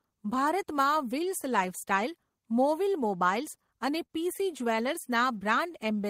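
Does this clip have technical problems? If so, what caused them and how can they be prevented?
Yes. At 4.06 to 4.10 s, a short stall from a late packet: the jitter buffer ran dry, so the last sound was held about 37 ms before playback resumed intact. From 5.32 to 6.05 s, a jitter buffer slow-down: repeated pitch periods added 62 ms, playing the speech at 92% speed with unchanged pitch. Both are prevented by a steadier network path and a jitter buffer target set high enough for the observed delay variation.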